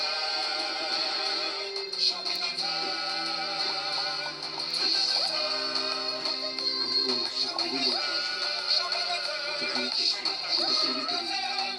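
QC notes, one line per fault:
0.48–11.75 s, word clock ticks: short ticks recur at a steady rate of roughly one every half second, around thirty in total across the span. The receiving device is running on its own clock rather than locking to the incoming digital stream. Each time the two clocks drift a full sample apart, a sample is dropped or repeated, leaving a tiny discontinuity in the waveform. The tick rate suggests the clocks differ by roughly 50 ppm.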